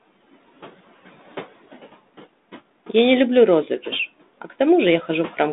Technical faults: noise suppressor artifacts

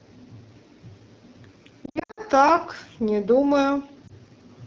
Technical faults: AMR wideband (HD Voice) codec; lost AMR speech frames

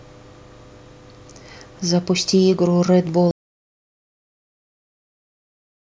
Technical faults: audio dropout to silence

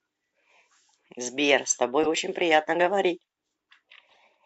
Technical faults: corrupt frame decoded

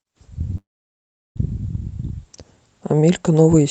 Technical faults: call audio freeze

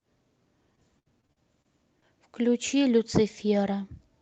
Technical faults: repeated packet loss (robotic sound)

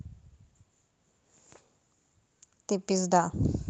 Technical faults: none

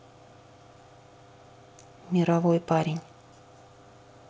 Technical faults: none

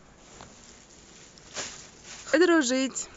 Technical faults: damaged data in a compressed stream

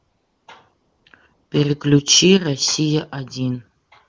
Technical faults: AMR comfort noise

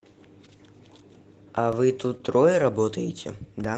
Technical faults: DC step; lost packet rebuilt from error correction; short concealed packet loss

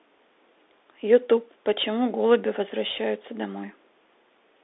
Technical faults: Bluetooth CVSD headset codec

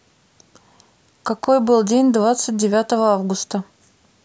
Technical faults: electrical switching spike

